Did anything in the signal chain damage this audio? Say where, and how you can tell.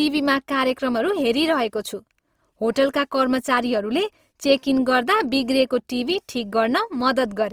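Yes: the codec stage, throughout the clip. The speech sounds rough and grainy, with noisy fill in the upper bands rather than swirling holes, yet content extends to about 20.3 kHz. That likely points to Opus compression in CELT mode, around 24 kbps, filling starved bands with noise.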